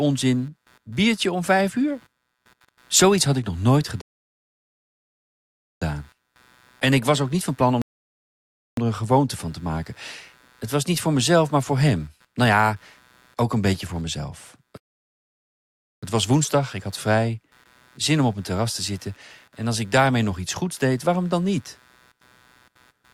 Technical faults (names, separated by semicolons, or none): computer activity noise; rebuffering stall